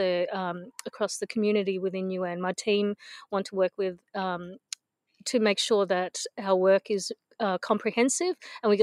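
No technical faults can be heard anywhere in the clip.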